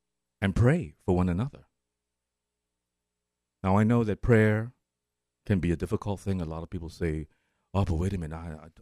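No technical faults can be heard anywhere in the recording; the speech signal stays continuous and stable throughout.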